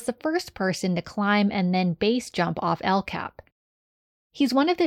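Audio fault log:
1.36–2.36 s, channel delay (comb filtering): right after "the first person to", one channel falls behind the other by about one sample and the pair is summed to mono. With so tiny an offset, the first cancellation notch sits around 20 kHz, so the sound turns slightly dull and loses its top air for this one second. This is unlike a low-pass filter, which gives a steep cut-off. Here the loss is a smooth, gradual slope toward that single notch at the top of the range.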